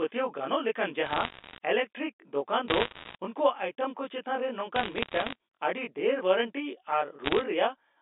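A telephone-band speech recording carries a steady comb filtering from a channel delay of roughly 20 ms summed to mono, which gives fixed, evenly spaced notches starting near 20 Hz and a rough, slightly doubled sound throughout. Unlike room reverberation, there is no decaying tail, only a static roughness. Bit errors on the digital phone line, at error rates of around 0.7 to 1.5 percent, add bursts of sharp ticks and crackle at 1.06–1.58 s, 2.68–3.15 s, 4.76–5.35 s and 7.24–7.44 s. Unlike packet loss, the speech keeps running underneath without gaps, and the G.711 band limit is audible as the usual narrow telephone sound.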